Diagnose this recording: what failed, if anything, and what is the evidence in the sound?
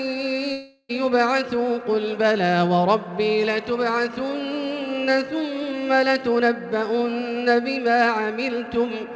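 Network stage: from 0.52 to 0.91 s the last sound smears into a fading buzz for about 0.37 s, then 20 ms of silence, and resumes with roughly 0.38 s gone. Unlike a short packet-loss glitch, the fill audibly decays. Likely a long network dropout.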